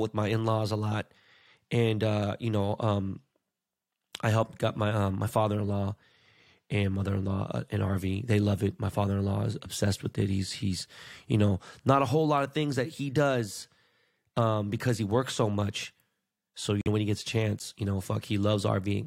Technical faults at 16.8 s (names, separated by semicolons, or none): corrupt frame muted